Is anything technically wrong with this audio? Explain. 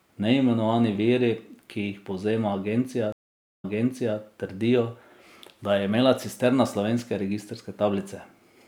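Yes. From 3.12 to 4.18 s the speech drops out for 0.51 s, then resumes 0.55 s earlier, repeating material: a stream reconnect, where a fresh decoder restarts after the server resends buffered audio.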